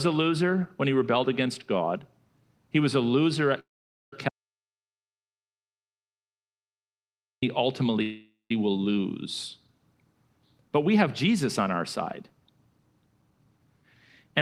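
Speech, and it has a few rough patches. Right after "was a loser" there's a call audio freeze from 3.59 to 4.13 s, likely because packets stalled and the jitter buffer ran dry. The last sound gets stretched into a fading buzz, ending in roughly 0.48 s of silence, then the speech resumes where it stopped. Nothing is lost, but everything after it lands about 0.53 s later. Almost immediately, from 4.29 to 7.43 s, there's an audio dropout to silence: 3.14 s of silence with no room tone at all. Whatever was said there is simply gone, likely because the input feed was lost while the recorder kept writing. A second call audio freeze runs from 8.02 to 8.51 s, just before "will lose," with the same likely cause. About 0.48 s is filled in, with the tail going silent for about 0.17 s, and again nothing is actually missing. Finally, from 10.76 to 11.32 s, leading into "on our side," there's a jitter buffer speed-up. 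The speech runs at about 107% with the pitch unchanged, because the receiver was likely trimming small pitch-period chunks, roughly 50 ms in total, to work off excess buffered delay. It comes across as slightly hurried.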